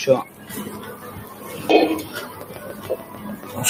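A noise suppressor built for speech has been left running across the whole clip, and it is treating steady, sustained parts of this sound as noise. Gain rides up on attacks and falls back on held portions and decays, with the attenuation swinging by around 15 dB. The result is an audible pumping and thinning, with tails and any ambience pulled down while onsets pass largely intact.

From 0.29 to 0.49 s the noise suppressor cuts the sound more heavily than elsewhere. It classifies the material in this 200 ms stretch as noise and pulls it down by as much as about 5 dB. The dip is heard as a brief sag in level, with the sustained content losing body and fading early rather than decaying naturally, before the gain recovers.

From 2.41 s to the end of the clip a train of clicks runs over the sound at a regular 6.8 per second. The clicks share a similar shape and stand well above the sound, peaking at roughly 15 dB over it, so they cut through as a steady ticking that carries on regardless of what the audio is doing. 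The evenly spaced pulses are likely interference from nearby equipment or a faulty connection.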